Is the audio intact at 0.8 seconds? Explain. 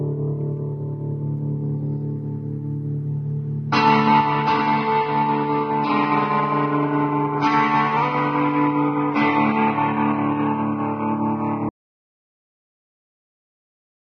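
Yes, the audio is intact at 0.8 seconds, with no dropout, click, distortion or other fault at that moment.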